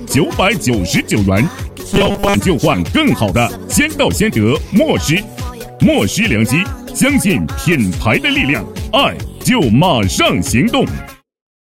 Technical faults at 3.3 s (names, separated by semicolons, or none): none